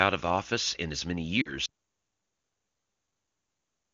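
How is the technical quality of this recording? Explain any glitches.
The recording has two glitches, both in the second half of the first two seconds, and the sound then cuts out completely.

From 1.41 to 1.53 s there are lost AMR speech frames. About 40 ms of coded audio, consistent with two 20 ms frames, failed the decoder's integrity check. The wideband decoder concealed the gap by repeating the last good pitch and spectral shape at falling gain, so the speech briefly smears and dips before recovering.

From 1.66 s to the end there is an audio dropout to silence. The signal stops mid-flow and the remainder is silent, with no room tone or background. This is likely a lost input or broken link while the encoder kept writing empty samples. Anything spoken after that point is unrecoverable.

Before the faults, the wideband speech is clean and consistent with a high AMR-WB rate.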